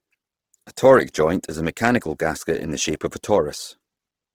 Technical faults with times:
0.00-4.35 Opus compression

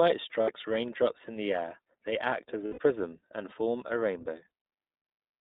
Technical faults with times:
0.00-5.42 iLBC codec
0.42-0.50 lost iLBC frames
2.66-2.79 lost iLBC frames

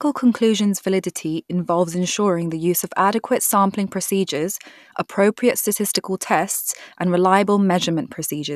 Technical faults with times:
none

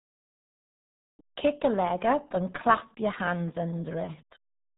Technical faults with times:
0.00-4.78 RealAudio 14.4 codec

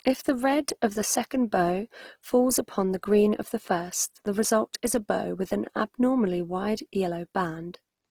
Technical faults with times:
0.00-8.11 Opus compression

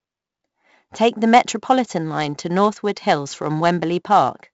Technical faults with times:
0.00-4.53 4-bit ADPCM compression

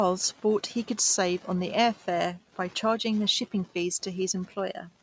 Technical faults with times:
none

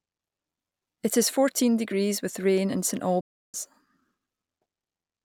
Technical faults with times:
3.21-3.54 playback stall

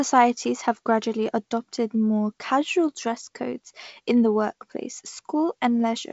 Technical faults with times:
none

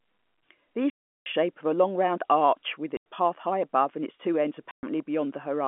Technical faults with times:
0.90-1.26 packet loss filled with silence
2.97-3.04 packet loss filled with silence
4.71-4.83 packet loss filled with silence

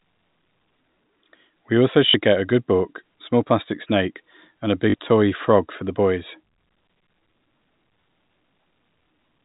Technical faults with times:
2.10-2.14 packet loss with last packet repeated
4.90-4.94 packet loss with last packet repeated

